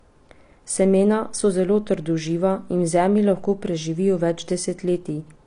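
From start to end, the speech sounds dull and smeared. Sibilants turn fizzy and sustained sounds warble. This is likely AAC compression. The encoder has starved the upper spectrum. The damage is plainly audible, which fits a low bitrate near 32 kbps.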